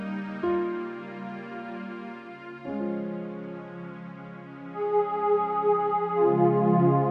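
Throughout, a wrong sample rate plays the audio at two-thirds speed without conversion, consistent with 48 kHz material clocked out at 32 kHz, so everything drags and sits about 7 semitones low.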